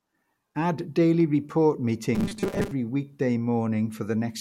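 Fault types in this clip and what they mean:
Robotic sound from repeated short buffers: a rigid metallic buzz near 200 Hz from 2.15 to 2.71 s, likely from about 5 ms of audio being repeated over most of that stretch.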